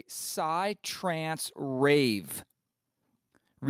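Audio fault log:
0.34 to 2.34 s, automatic gain rising: the gain control judged the input too quiet and pushed its level up steadily, by about 8 dB over two seconds, so the speech and the background noise beneath it swell louder together rather than the voice alone.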